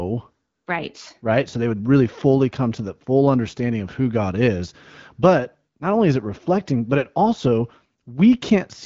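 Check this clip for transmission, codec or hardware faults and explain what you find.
No transmission, codec or hardware faults.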